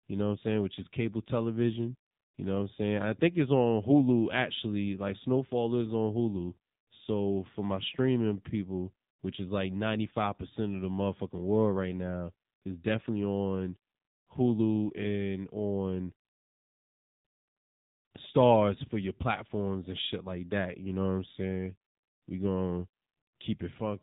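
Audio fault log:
Throughout: AMR narrowband mobile codec. The speech has nothing above 3.8 kHz, giving a boxed-in telephone tone, and the damage is plainly audible as a buzzy, synthetic edge. That fits a low AMR-NB mode around 7.4 kbps, where 8 kHz sampling and a vocal-tract model on 20 ms frames leave few pulses.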